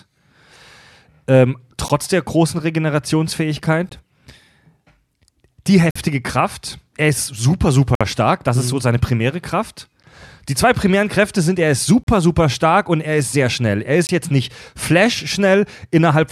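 The time stamps of consecutive two-second stream segments leave small gaps between segments, and the player fills each with silence, so gaps between stream segments cut hard-edged holes into the speech at 1.88 s (just before "der großen"), 3.89 s, 5.91–5.96 s, 7.95–8.01 s, 10.03 s, 12.04–12.07 s (between "sind er ist" and "super stark und er") and 14.07–14.09 s (before "jetzt nicht"). The holes last about 12 to 55 ms and recur roughly every two seconds. Nothing is lost; the silence just adds time.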